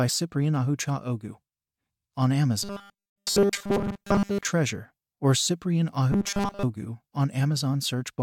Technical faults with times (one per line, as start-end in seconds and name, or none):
2.63-4.45 robotic sound from repeated short buffers
6.12-6.63 robotic sound from repeated short buffers